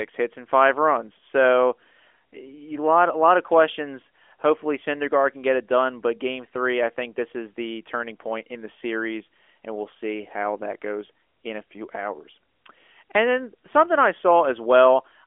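No technical fault is present in the speech, which carries the narrow telephone band of an AMR narrowband mobile codec, roughly 300 Hz to 3.4 kHz, with the light coding texture that fits its top 12.2 kbps mode.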